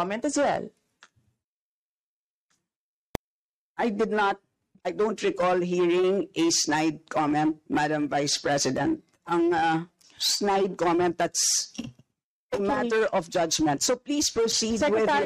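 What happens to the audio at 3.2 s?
A single sharp bang at 3.15 s: invalid numbers at full scale. A calculation produced infinite or invalid values, and they were forced to the maximum level for a block only 0.73 ms long, which fits 32 samples. Over so brief a span, the jump to the extreme value and back is heard as one bang.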